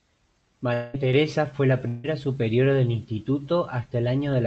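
From 0.73 to 0.96 s the speech gives way to a smeared, buzzy continuation of the preceding sound that fades without ever reaching true silence. The speech then resumes with about 0.2 s of it simply gone. This is a long network dropout, likely caused by a run of lost packets that the receiver papered over with concealment. It differs from a brief packet-loss glitch by its length, and from a plain mute because the gap is filled with decaying synthetic sound. The same thing happens from 1.88 to 2.06 s, where about 0.16 s goes missing behind a similar fading buzz.

At 1.13 s the level steps up by about 4 dB in a single instant and stays there to the end. This sudden gain jump likely comes from a gain setting applied with no ramp. The background noise rises by exactly the same amount as the speech, which separates it from a talker getting louder. It also differs from automatic gain control, which would ease in rather than switch, all under the narrowed top end of the Opus call path.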